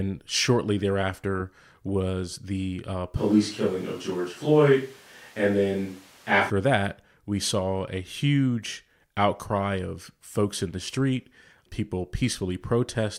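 A speech recording where, from 3.17 to 6.50 s, after "thereafter was the uh" and until "that we saw a", the sound abruptly turns roomy and thin, with room noise rising to roughly 30 dB below the speech while loudness stays similar. That points to a likely switch to a distant microphone. Unlike added reverb, the change is instant at both edges and brings bass loss and background noise along with it.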